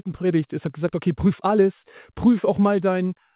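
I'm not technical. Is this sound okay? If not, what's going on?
No. At about 0.66 seconds there is a skip ahead. The connection had already received later sound, so a chunk, roughly seven tenths of a second, was dropped and what came before was joined directly onto what came after. You hear an abrupt jump forward with no pause, as though a piece were cut out of a tape and the ends stuck together.

From 1.26 to 1.58 seconds there is a jitter buffer speed-up. Sound had piled up waiting, so the receiver quietly trimmed many tiny slivers, together about 40 milliseconds, to catch up. During that third of a second the sound plays about 9 percent faster without changing pitch, so it comes across as briefly rushed. The muffled, phone-line quality, with nothing above 4 kHz, comes from the call connection itself.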